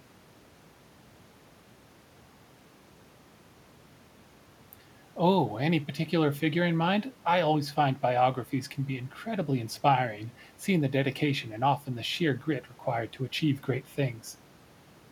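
Nothing stood out as a technical problem on listening to this speech recording.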